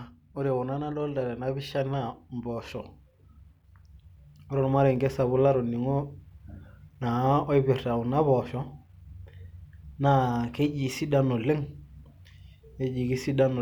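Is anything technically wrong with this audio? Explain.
Yes. There is a single sharp click in the speech at 4.96 s and another at 10.66 s. Both are likely dropped samples: a tiny fraction of a millisecond goes missing, so the waveform jumps abruptly to a later value. The gap is far too brief to remove any audible sound.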